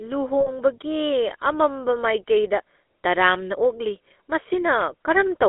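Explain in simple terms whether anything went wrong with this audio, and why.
Yes, two things went wrong. The whole recording went through the GSM full-rate codec, the old mobile-phone voice coder. It rebuilds speech from a simplified model driven by a coarse pulse train, so the voice sounds buzzy and gravelly, squeezed into a narrow band of roughly 250 Hz to 3.6 kHz.

There are also lost GSM frames from 0.40 to 0.50 s, a gap of about 60 ms. The decoder covered the gap by repeating the last good sound, which is heard as a brief rough, metallic ring.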